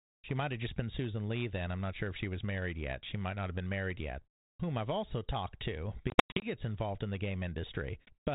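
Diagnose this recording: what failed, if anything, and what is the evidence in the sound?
Packet loss on an ADPCM call, at the network stage: between 6.1 and 6.46 s about 220 ms of the 32 kbit/s G.726 audio drops out as hard-edged silent gaps scattered over 320 ms, the longest 100 ms. That pattern fits around ten lost packets. Unlike a plain dropout, the sound resumes distorted after each gap until the decoder's predictor and step size re-adapt to the sender's.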